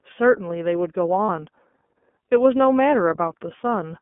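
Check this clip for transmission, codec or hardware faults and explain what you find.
Two faults are audible in this speech clip. Throughout, the sound is band-limited to roughly 200 Hz–3.4 kHz with a plainly rough, synthetic edge: the iLBC codec, which codes each 30 ms frame independently at narrowband.

At 1.26–1.30 s a brief held, slightly buzzy tone fills a 30 ms gap. This is a lost iLBC frame, concealed by repeating the last pitch cycle with noise, which fits a single dropped frame.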